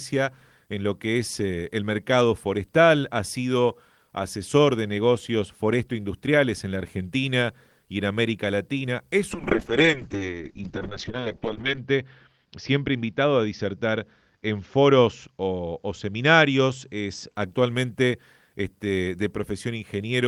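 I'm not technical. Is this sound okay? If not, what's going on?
No. From 9.33 to 17.41 s, a call bitrate drop makes the sound muffled and rough; unlike a poor microphone, clarity returns once the connection recovers.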